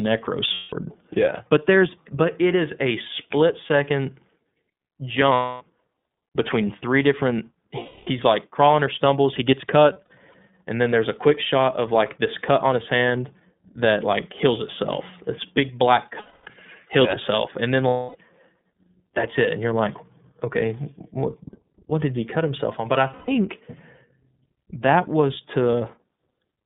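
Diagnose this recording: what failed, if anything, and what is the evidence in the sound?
The iLBC codec sits at the codec stage throughout. The whole clip is confined to roughly 150 Hz to 3.6 kHz and has a plainly rough, synthetic edge. That grain is what sets it apart from a simple narrowband line filter, which would dull the sound without roughening it. It fits iLBC at 13.33 kbps with 30 ms frames.

Lost iLBC frames point to the network stage. Gaps start at 0.54, 5.33, 7.79 (after "between three different"), 9.93 (after "or stumbles he gets"), 16.19 (after "big black"), 17.88 and 23.13 s, and each lasts 120 to 270 ms. The event at 9.93 s is a scatter of short losses spread over 420 ms, none longer than about 70 ms. Each gap is filled with a held, buzzy, breathy vowel rather than silence, and the sound recovers almost instantly afterwards. Those two traits separate concealment in a self-contained codec from a plain dropout or from decoder recovery that smears across the following frames.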